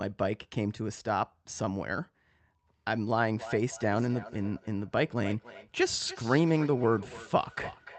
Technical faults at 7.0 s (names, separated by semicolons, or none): feedback echo between two devices